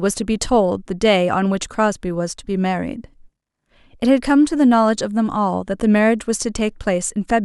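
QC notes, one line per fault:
Nothing to flag here; the speech comes across without any technical problems worth a line.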